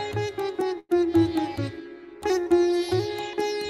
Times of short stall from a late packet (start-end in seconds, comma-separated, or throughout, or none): 0.79-0.92